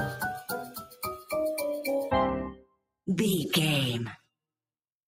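The level keeps pumping and thinning, with sustained parts and tails sinking while sharp onsets punch through, a swing of around 10 dB, because a noise suppressor built for speech was applied to music or sounds and treats steady content as noise. The sound is cut by the noise suppressor twice: from 0.85 to 1.03 s it drops by about 10 dB, and from 2.54 to 2.85 s it dips much harder, by about 21 dB. In both places the suppressor mistook held or decaying sound for noise and pulled it down.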